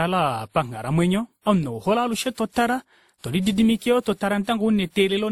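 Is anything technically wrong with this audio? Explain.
Yes. The whole speech clip carries a layered coding sound, which is the signature of transcoding between lossy codecs. The texture points to something like a low-rate Opus encode, likely followed by a WMA encode at a moderate rate. The second codec spends its bits on the first one's artefacts and stacks its own on top, so you hear two flavours of coding grit at once. The top end also stops at about 19.8 kHz.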